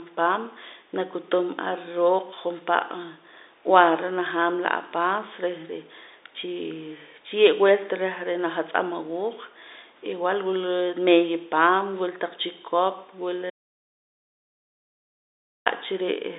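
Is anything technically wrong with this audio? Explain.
Yes. From 13.50 to 15.66 s, just after "wila taq chikop wila", the speech abruptly vanishes for about 2.2 s, leaving only a low mains hum roughly 45 dB below the speech. This audio dropout to a faint residue likely comes from the signal feed breaking while the downstream input stayed live, picking up hum. The telephone band, with nothing above about 3.8 kHz, is normal for G.711 coding.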